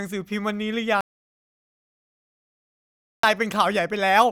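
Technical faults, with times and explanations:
1.01 to 3.23 s, audio dropout to silence: The speech cuts off abruptly at 1.01 s and returns mid-flow at 3.23 s. For about 2.23 s there is silence, with no room tone or background hiss under it. That silence means the input signal itself was lost, most likely through a disconnected device, a failed link or an accidental mute, while recording carried on writing silence. Whatever was spoken in that gap is gone.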